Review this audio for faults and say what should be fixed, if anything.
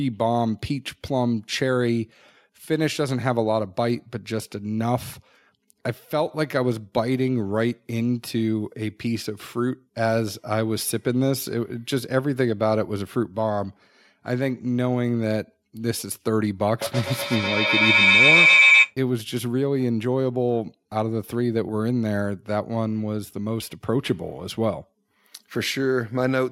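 A feedback howl builds from 16.81 s to 18.97 s. Sound from a loudspeaker is picked up by a microphone in the same room and sent back out with net gain on each trip, so the repeats grow and narrow to a tone near 2 kHz, pulsing roughly every tenth of a second. At its loudest it sits about 8 dB above the speech. To prevent it, run only one device with audio in the room, or mute the second microphone and speaker.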